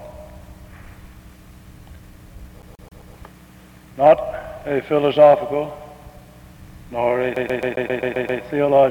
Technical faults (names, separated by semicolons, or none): CD stuck on one turn